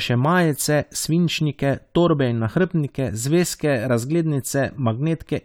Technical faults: none

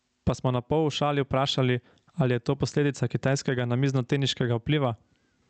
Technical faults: gain pumping

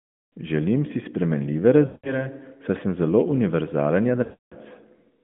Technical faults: lost AMR speech frames

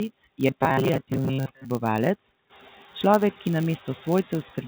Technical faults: noise suppressor artifacts; filter restarted on every block; robotic sound from repeated short buffers

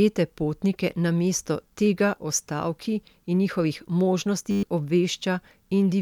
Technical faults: system hang loop

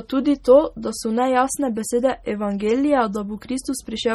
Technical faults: MP3 compression

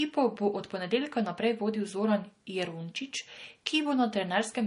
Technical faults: transcoding between lossy codecs

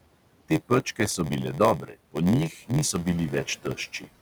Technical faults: noise suppressor artifacts; block size mismatch (padded); speech cut by the noise suppressor

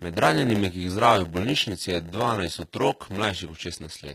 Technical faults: block size mismatch (padded); HE-AAC compression

